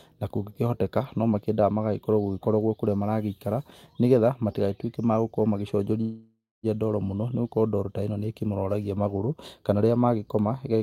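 From 6.01 to 6.66 s the speech halts in a call audio freeze, likely from delayed packets emptying the jitter buffer. The last sound is stretched into a fading buzz, then about 250 ms of silence, before resuming where it stopped, now 0.62 s late. A spectrogram shows smeared horizontal bands thinning to a blank gap.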